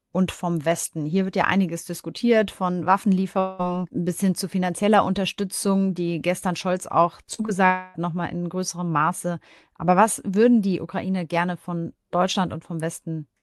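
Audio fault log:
3.39–3.61 s, long network dropout: about 0.2 s of speech is missing, bridged by a fading buzzy continuation of the preceding sound, likely from a stall in packet arrival.
7.23–7.50 s, repeated packet loss (robotic sound): five short gaps, the longest 39 ms, are each patched by extending the last sound, covering about 41% of the span and giving choppy speech.
7.66–7.96 s, long network dropout: about 0.28 s never arrives; the preceding sound is stretched into a decaying buzz before speech resumes with that portion gone.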